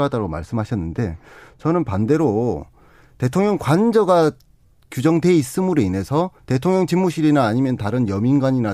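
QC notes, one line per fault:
0.00–2.00 s: de-emphasis applied wrongly. A treble cut meant to reverse pre-emphasis hit audio lacking it, or was applied twice, so the speech sounds muffled, about 8 dB down at 10 kHz against 1 kHz. Spectrogram: upper bands darken progressively toward 10 kHz, then recover after 2 s.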